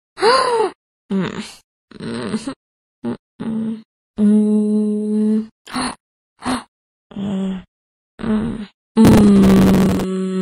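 A recording of sounds. Processor overload crackle tears through it from 5.6 to 6.55 s and from 9.05 to 10.04 s. Tiny buffers, around 5 ms each, miss deadlines repeatedly and replay old audio.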